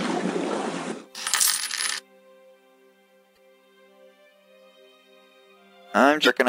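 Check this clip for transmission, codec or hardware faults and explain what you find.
There's one kind of fault here, showing up twice: damaged data in the compressed stream, at 3.33 to 3.38 s and again at 6.23 to 6.28 s. Bad bytes throw the decoder off sync, so it garbles those frames while hunting for the next header, giving a brief glitch each time.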